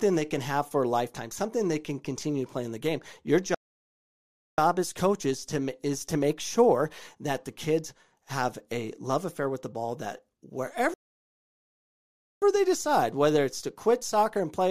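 At 3.54 s the speech cuts to silence for 1.03 s, resuming with "as coaches to is". At 10.94 s it stops for 1.48 s, then "they decide whether it's". Both are playback stalls, likely from the player running out of data.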